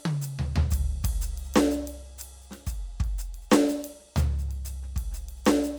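Nothing in the music stood out as a technical problem on listening.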